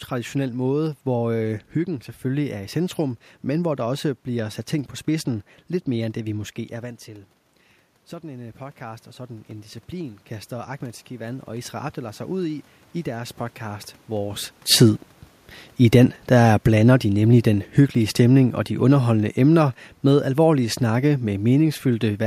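From 8.2 to 14.5 s, after the speech input drops by about 14 dB, the automatic gain rises by about 10 dB. Voice and room noise swell together, visible as a waveform envelope and noise floor climbing in step.

From 18.19 to 21.71 s, just after "de nemlig den hyggelige", the automatic gain falls by about 4 dB. The speech and background sink together, with the waveform tapering and the spectrogram's noise floor darkening evenly.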